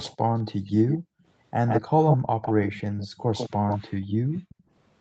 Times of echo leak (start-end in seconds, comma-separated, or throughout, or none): 0.03-0.16, 0.67-0.98, 1.67-4.55